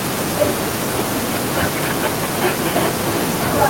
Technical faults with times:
2.81-3.26 echo leak

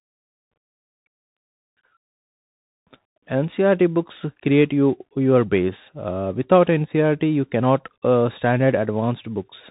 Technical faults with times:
0.00-9.71 Bluetooth CVSD headset codec

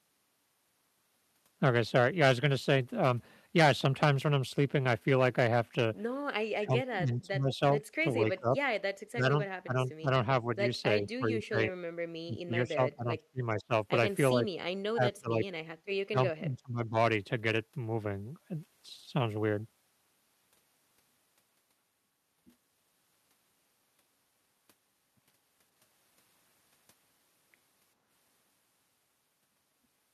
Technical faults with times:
6.53-8.56 speech suppressed in double talk
9.11-10.48 speech suppressed in double talk
11.02-13.72 speech suppressed in double talk
14.33-15.47 speech suppressed in double talk
16.03-16.96 speech suppressed in double talk

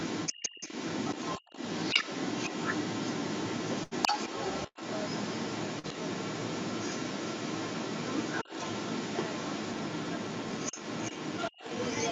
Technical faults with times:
0.00-12.12 sample clock jitter
0.00-12.12 other side's voice leaking through
0.41-0.70 speech suppressed in double talk
1.43-1.52 speech suppressed in double talk
3.83-3.94 burst of packet loss
4.67-4.78 burst of packet loss
5.79-5.86 short concealed packet loss
8.44-8.50 speech suppressed in double talk

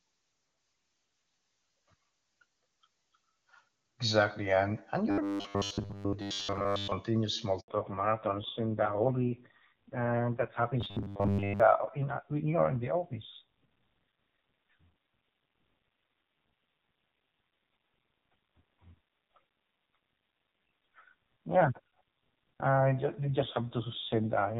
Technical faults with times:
5.11-6.93 robotic sound from repeated short buffers
7.60-7.68 handover gap
7.68-24.59 fallback to narrowband
10.81-11.60 robotic sound from repeated short buffers

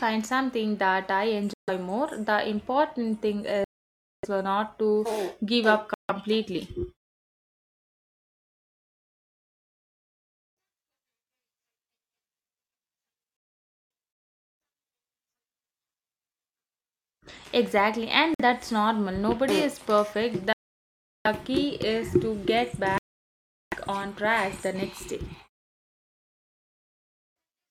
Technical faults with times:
1.53-1.70 Bluetooth stall
3.64-4.25 Bluetooth stall
5.94-6.10 Bluetooth stall
13.37-13.90 Bluetooth stall
18.34-18.41 Bluetooth stall
20.53-21.27 Bluetooth stall
22.98-23.74 Bluetooth stall

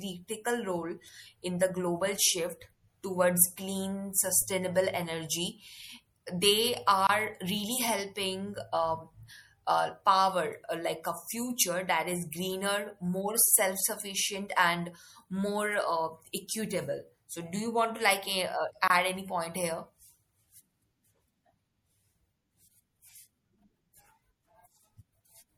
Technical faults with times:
0.00-25.57 MP3 compression
4.42 DC step
7.07-7.09 gap at a join of encoded pieces
18.88-18.90 gap at a join of encoded pieces

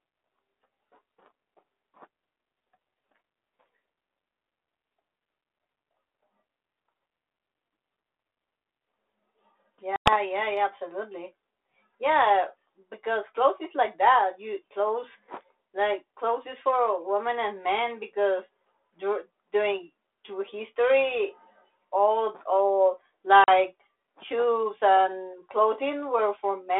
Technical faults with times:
9.96-10.14 packet loss on an ADPCM call
23.44-23.49 packet loss on an ADPCM call

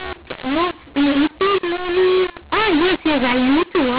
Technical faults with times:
0.00-3.98 mu-law and A-law mixed up

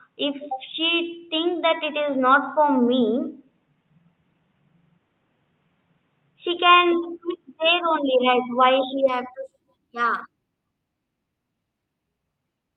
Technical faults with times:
0.00-9.08 input switched to a poorer device

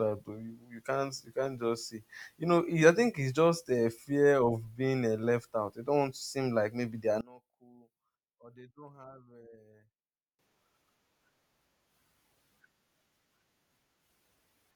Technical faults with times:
7.21-10.39 one channel inverted

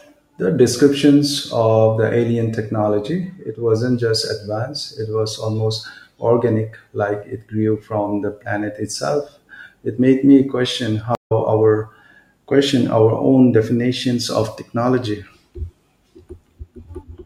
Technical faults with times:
11.15-11.32 stream reconnect

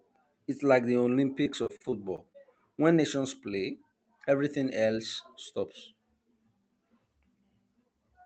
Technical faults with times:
1.43-2.61 repeated packet loss (robotic sound)
7.29-7.96 jitter buffer speed-up

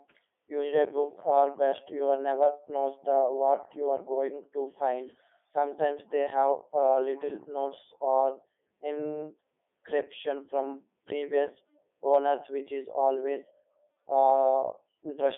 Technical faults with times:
0.00-15.37 Codec 2 vocoder

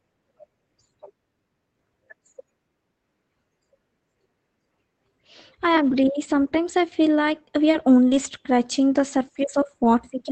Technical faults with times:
7.71-7.75 short concealed packet loss
7.73-7.81 lost packet rebuilt from error correction
8.09-8.13 short concealed packet loss
8.11-8.17 lost packet rebuilt from error correction

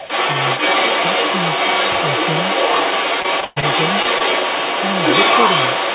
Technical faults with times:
0.00-5.94 other side's voice leaking through
3.22-3.64 repeated packet loss (robotic sound)
4.02-4.22 short concealed packet loss

